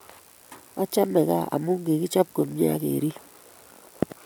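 No technical faults can be heard anywhere in the recording, with the signal holding steady and intact across its whole duration.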